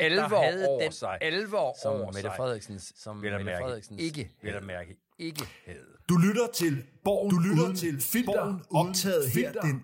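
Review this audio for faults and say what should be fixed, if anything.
A doubled audio track runs through the whole clip: a second, full-band copy of the sound trails the original by about a second, around 5 dB quieter. It carries no decay or room colour, so it registers as a clean repeat of the program rather than an echo. This most likely comes from the same source being captured twice, once through a slower path, or from two out-of-step copies left stacked in an edit. To prevent it, route each source through a single capture path and check the timeline for duplicated regions before mixdown.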